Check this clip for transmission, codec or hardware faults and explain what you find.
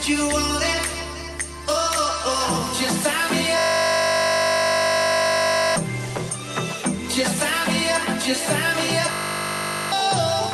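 Two faults are present, both a system hang loop. From 3.58 to 5.76 s, and again from 9.12 to 9.92 s, the sound collapses into a steady, rasping buzz at 50 Hz. The system froze while the audio hardware kept replaying the same 20 ms stretch of its ring buffer, roughly a hundred times in the first event and about forty in the second. Because such a short fragment repeats so fast, it fuses into a buzz rather than a stutter. The underlying audio is lost for about two seconds in the first event and about 0.7 s in the second. Around these events the call-path coding is audible, with content fading out above about 12 kHz, consistent with Opus.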